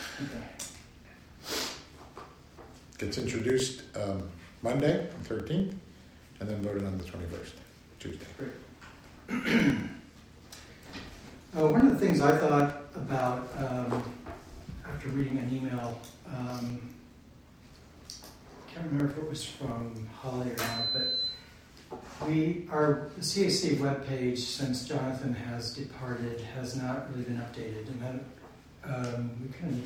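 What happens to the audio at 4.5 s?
At 4.5 s the audio is inside a run of periodic USB or driver dropouts lasting from 0.10 to 19.80 s. Every 0.1 s, a blocked bus or driver drops roughly 2 ms to silence, giving steady ticks. The waveform shows short flat gaps and the spectrogram shows evenly spaced thin vertical lines.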